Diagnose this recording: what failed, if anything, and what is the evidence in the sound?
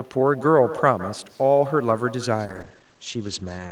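Echo with no canceller, a call-processing fault, is present throughout. Each phrase is followed after around 150 ms by a quieter, thinner copy about 17 dB down. The far end's loudspeaker output is reaching its microphone, and no echo canceller removes it before it returns.

A call bitrate drop, a codec and network fault, begins at 2.46 s and lasts to the end of the clip. The speech turns rough and muffled, and the bandwidth falls from 20 kHz to 8 kHz. This fits the encoder being pushed from about 64 kbps down to roughly 15 kbps after the bandwidth estimate fell.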